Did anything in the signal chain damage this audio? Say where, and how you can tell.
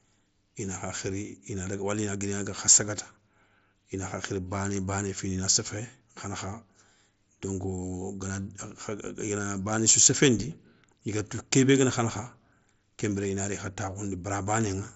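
No, nothing stood out on listening that points to damage at any stage of the signal chain.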